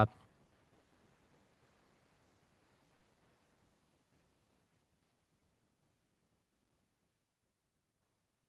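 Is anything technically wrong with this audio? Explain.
Yes, the speech has three kinds of technical fault.

From 0.95 to 1.07 s there is loose connector crackle. A worn or dirty contact kept making and breaking the signal, chopping it, which is heard as an irregular scratchy crackle lasting about a tenth of a second.

From 2.95 to 3.03 s there is a burst of packet loss. Audio failed to reach the receiver in time, so it stretched the last sound for about 60 ms while fading it out. When playback resumes, roughly 60 ms of the original is gone, leaving an audible skip.

At 5.40 s and 7.11 s there is a repeated buffer. New audio arrived late, so the device replayed its last tiny block, which fits a buffer of about 5 ms. At 5.40 s it repeats several times and about 15 ms of audio is lost. At 7.11 s it repeats once and about 5 ms is lost. Each event is heard as a brief click or buzz. The call path's high-frequency cut-off at 12 kHz fits the Opus codec running at around 32 kbps.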